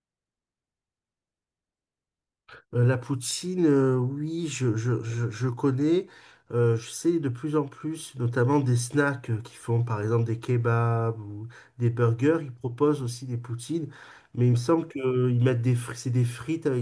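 No technical faults can be heard anywhere in this recording.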